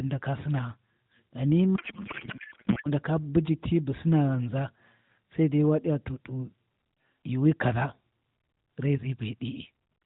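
From 1.76 to 2.88 s, between "ndaka sinaa ghani" and "ndaka buji ti bu", a codec payload misread replaces the speech with garbled, warbling noise. Octet-aligned AMR frames are being unpacked as bandwidth-efficient, so every field lands in the wrong place. On a spectrogram the harmonic bands vanish into smeared energy below 4 kHz, the narrowband ceiling of the AMR codec.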